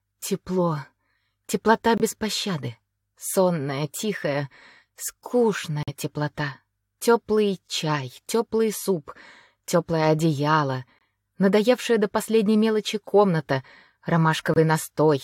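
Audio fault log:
1.97–2.02 s, 5.83–5.89 s, 10.99–11.02 s, 14.54–14.58 s: corrupt frame muted. Abrupt silent holes of 34 to 60 ms, consistent with two bit-damaged compressed frames rejected by the decoder and replaced by silence, with timing kept.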